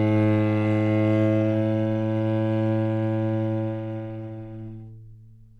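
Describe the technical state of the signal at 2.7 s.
At 2.7 s the signal is intact, with no audible fault.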